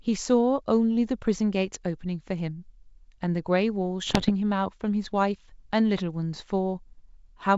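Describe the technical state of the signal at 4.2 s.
Bit errors on an ADPCM link strike from 4.07 to 4.32 s. Each flipped bit throws off the decoder's prediction, causing pops and rough, jumpy bursts.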